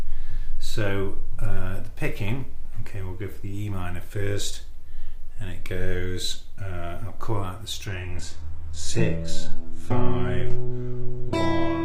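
At 7.86 s the audio abruptly loses its clarity and stays degraded to the end at 11.85 s. Nothing remains above about 12.3 kHz, coding artefacts become audible, and the change is instant with no gap or dropout. This is an adaptive stream at a lower bitrate: the player switched to a cheaper version of the stream midway, consistent with a slowing connection. The sound fits a drop from roughly 96 kbit/s AAC-LC to HE-AAC at 16 kbit/s.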